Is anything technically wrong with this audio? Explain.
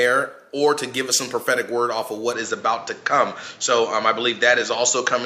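Yes. From 2.33 s to the end, the input likely switched to a poorer device. Nothing above 7.6 kHz remains, and a faint new background noise appears. The switch is seamless and the level holds steady, but this new noise floor and tonal change point to a different microphone rather than simple filtering.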